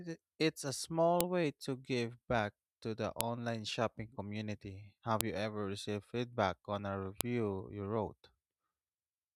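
Sharp, loud clicks land at 1.21 s, 3.21 s (between "back to the" and "shopping community"), 5.21 s (just before "you ever received feedback") and 7.21 s (between "received feedback on a" and "you wrote"), exactly 2.0 s apart. This is a file header played as audio: each 2-second piece kept its header, and those bytes are read as samples. On a waveform each appears as a near-instant spike unrelated to the speech envelope. On a spectrogram it is a thin vertical line spanning all frequencies.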